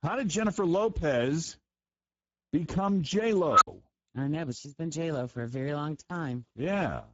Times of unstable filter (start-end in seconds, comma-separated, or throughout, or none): 3.50-3.67